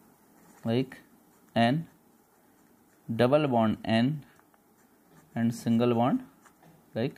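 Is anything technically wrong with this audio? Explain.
No, nothing technically wrong stands out here; the audio sounds fine all the way through.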